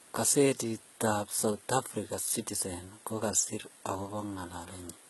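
Throughout the speech, the encoder has likely applied heavy HE-AAC compression, coding only the lower band properly and synthesising the treble by spectral band replication, copying lower bands upward under a coarse envelope. The damage points to a very low bitrate in the region of 16 kbps. Nothing survives above 11.8 kHz, and the rebuilt upper band has harmonics that fail to line up with those below, so sibilants come across gritty, metallic and lispy.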